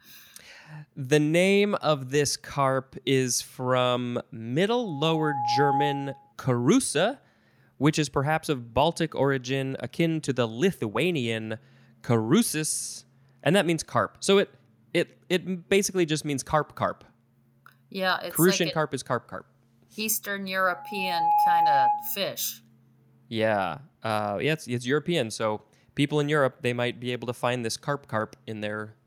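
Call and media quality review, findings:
Loudspeaker feedback squeal: steady 833 Hz tone swelling over under a second to a few dB above speech, 4.83–6.33 s and 20.70–22.18 s. Mic picking up its own loudspeaker; loop gain above one at 833 Hz, tone self-sustaining until loop broken.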